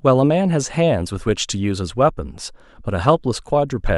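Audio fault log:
No faults detected in this speech.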